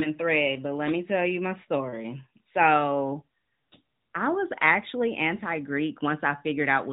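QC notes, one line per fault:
No faults found.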